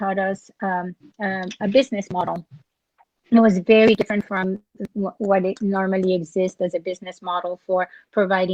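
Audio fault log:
No audible faults detected.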